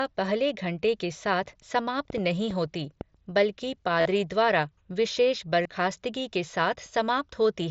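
From 2.10 to 3.02 s a train of clicks sits over the speech. There are about four of them, roughly 3.3 per second, spaced irregularly. They peak around 10 dB above the speech. Each click has much the same sharp shape, heard as a ticking or popping that cuts through the voice. The likely cause is electrical interference or a faulty connection or power supply injecting pulses.

At 4.01 to 4.06 s there is concealed Bluetooth headset packet loss. About 45 ms of audio went missing between headset and phone, which fits six lost 7.5 ms frames. The receiver filled the gap by repeating the best-matching recent stretch of waveform. This run is long enough to sound buzzy and tonal at full level. A slight warble follows as real audio returns. A shorter loss of 22.5 ms follows at 5.63 s, a run of three frames. The wideband mSBC link carrying the speech can be heard as a light graininess.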